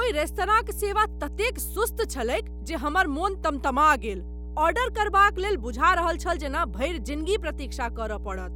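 Speech with mains hum running the full length: a steady 60 Hz tone, strong at roughly 10 dB below the speech, from power-line pickup through a ground loop or nearby transformer. Its fixed pitch and constant level set it apart from irregular, broadband rumble.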